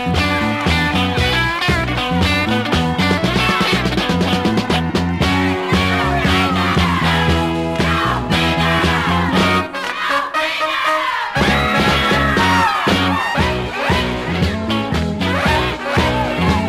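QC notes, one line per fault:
14.82–15.03 s, DAB burbling: a brief patch over the sound lasting about 0.2 s, which fits roughly nine MP2 frames. Bit errors near 0.2 percent slipped past error correction, corrupting MP2 audio data so single sub-bands got short blips of noise.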